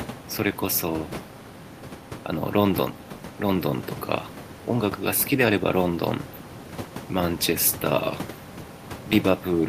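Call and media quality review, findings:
No faults found in the speech audio. Room noise is audible underneath, about 16 dB below the speech, and belongs to the recording environment.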